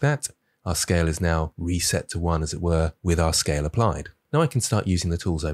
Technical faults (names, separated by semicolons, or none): none